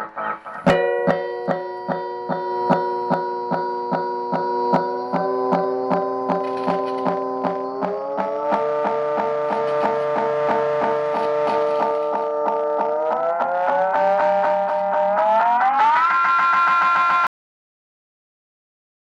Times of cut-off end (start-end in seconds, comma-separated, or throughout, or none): 17.27-19.04